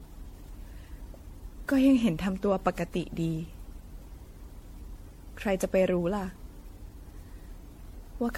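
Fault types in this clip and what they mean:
Generation loss: the speech was likely decoded and re-encoded about ten times through an MP3 codec at a rate that sounds like 64 kbit/s, each pass requantising on a shifted frame grid, so it sounds swirly, hollow and smeared, with blurred consonant attacks and nothing above 16.5 kHz.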